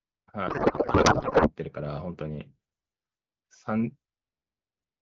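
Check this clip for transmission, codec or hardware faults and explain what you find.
One fault, a codec payload misread, runs from 0.47 s to 1.52 s. The sender and receiver disagree on how the AMR-WB bits are packed. The result points to octet-aligned frames being read as bandwidth-efficient, so each frame's fields are taken from the wrong bit positions. The decoder treats this as valid data, and for that second the speech gives way to garbled noise and warble that barely tracks it. Either side of the fault, the clear AMR wideband sound fits a 12.65 kbit/s rate.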